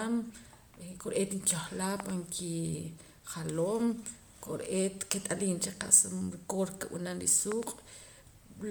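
A likely cause is Bluetooth LC3 compression running through the whole speech clip. The transform coder works at a low rate, which fits something near 48 kbps in 10 ms frames, discarding upper-spectrum detail and filling gaps with noise. The result is a plainly audible breathy, grainy edge, though the band still reaches about 20.1 kHz.

At 2.00 to 2.12 s, between "kore'eet nkehlaa" and "kijaloom kore'eet kit'aliim cha", a voltage step, probably from a plug or switch, lands on the signal as a loud pop: two sharp cracks about 15 dB above the speech, which carries on underneath. The same double loud pop returns at 7.52 to 7.65 s, right after "cha qa'sa rukoor nkib'anam".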